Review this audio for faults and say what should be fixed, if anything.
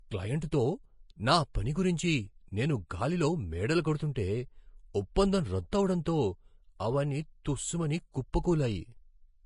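The whole speech track has a hissy, grainy top end with nothing above 10.5 kHz, which sounds like Vorbis compression, likely at a low bitrate around 28 kbps. The encoder's coarse treble quantisation turns fine detail into noise, and the codec damage is plainly audible. Encoding from the original at a higher quality setting would avoid it.

There's pre-echo at 5.72 s and at 8.33 s, just after "అవన్నీ తుస్స్ మని", each a short hiss lasting 11 to 12 ms. Quantisation noise meant for the loud onset is spread back into the quiet moment before it, so the attack comes out smeared. A higher bitrate helps here too, giving sharp transients enough bits.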